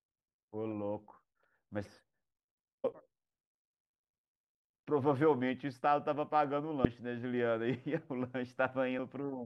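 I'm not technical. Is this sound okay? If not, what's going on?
No. There is damaged data in a compressed stream: some of the stored speech data got corrupted, so the player briefly loses its place and has to resync. You hear each one as a tiny chirp or blip, at 2.84, 6.85 and 8.98 seconds.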